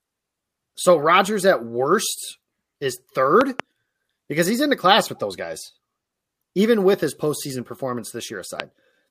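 Loud pops strike this speech clip twice: a pair of sharp pops between 3.41 and 3.62 s, then a single pop at 8.60 to 8.62 s, each peaking well above the speech, around 15 dB louder. The likely cause is a sudden voltage step or pulse, from a plug, switch, static discharge or driver glitch, entering the signal chain. The speech continues underneath each one.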